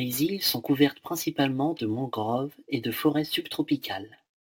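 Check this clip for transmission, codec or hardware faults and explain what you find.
One hardware fault runs through the whole speech clip: sample clock jitter. A hiss and roughness rides on the louder, brighter sounds and vanishes in the pauses, sitting roughly 25 dB below the signal. The converter's clock wanders by a few microseconds, so samples land early or late, and steeper waveforms turn that timing error into noise.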